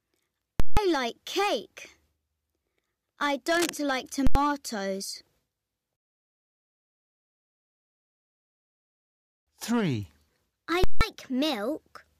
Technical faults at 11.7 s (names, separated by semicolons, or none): none